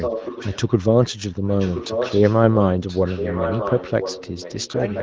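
From the start to 0.7 s, then 1.03 to 2.59 s, and 2.79 s to the end, there's an echo leak: a quieter copy of the speech, roughly 10 dB down, trailing 1.03 s behind. Likely a speakerphone whose echo canceller let its own playback slip back through.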